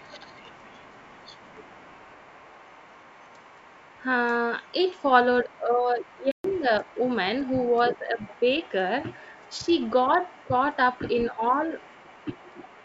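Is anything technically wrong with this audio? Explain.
Yes. Three kinds of fault run through this speech clip.

Other side's voice leaking through, from 0.0 to 4.04 s and again from 4.63 s to the end. A second voice sits faintly underneath the main talker, roughly 25 dB down, for nearly the whole clip. It is likely echo from a loudspeaker that the echo canceller failed to subtract from the microphone signal, so the far end's audio returns in weakened form beneath the near talker.

Speech suppressed in double talk, at 5.44 to 6.71 s, 7.97 to 8.09 s, and 11.31 to 12.64 s. The main voice dips in level while the leaked voice is active: by about 10 dB in the first stretch, a slight dip of about 5 dB in the second, and up to about 15 dB in the last. With both sides talking, the echo canceller likely could not tell its own talker from the echo, so it attenuated everything.

Playback stall, from 6.32 to 6.44 s. 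The sound drops to silence for about 129 ms in mid-flow, then resumes. The likely cause is the player running short of data or its thread being blocked, leaving nothing to output until it caught up. The gap falls inside the first suppressed stretch, so the voice there both dips and briefly vanishes.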